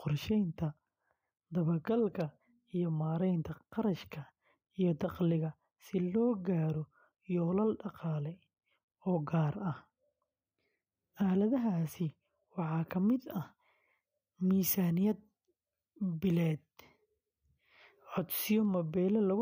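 From 12.98 to 18.65 s, the speech has pre-emphasis left on. The treble boost was applied but never undone. Highs sit about 13 dB above 1 kHz at 10 kHz, which fits a 75 µs FM curve. The sound turns thin, bright and hissy.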